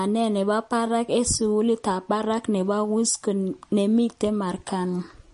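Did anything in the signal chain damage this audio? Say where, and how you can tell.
Yes. MP3 compression damages the speech throughout, at the codec stage. Nothing is present above 10.6 kHz, and weak frequency components flicker between frames, giving a plainly audible watery, swirly texture and smeared consonants. This is likely a low-bitrate MP3 encode, around 40 kbps.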